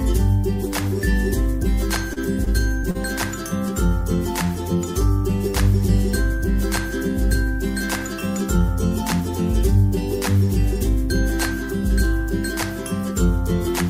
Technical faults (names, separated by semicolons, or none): short stall from a late packet